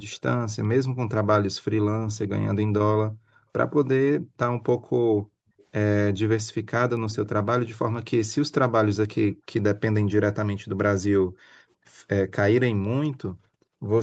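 From 0.11 to 0.18 s a faint copy of the speech, about 30 dB below it, returns 343 ms late. A similar echo appears again later. This is likely an echo leak, where a far-end loudspeaker's echo slipped past its canceller. It differs from room reverb because it is a distinct delayed repeat and not a smooth tail. Background gated by the echo canceller follows at 4.19 to 4.37 s (a dip of about 18 dB), at 4.78 to 4.92 s, and at 5.2 to 5.58 s. In those two later spans the room sound falls away by about 40 dB. Unlike a network dropout, the room noise vanishes briefly while the microphone is clamped, then recovers. The echo returns at 5.58 to 5.65 s, about 35 dB down, and at 7.14 to 7.28 s, both times 364 ms behind. A final gated dip of about 39 dB runs from 11.25 to 11.85 s.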